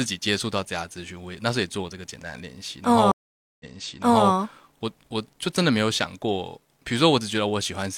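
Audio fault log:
3.12–4.30 s, stream reconnect: speech stops for about 0.48 s, then returns about 0.7 s earlier, repeating audio already heard, with a muted or faded first instant. The connection broke, the server resent a burst, and a fresh decoder restarted mid-stream.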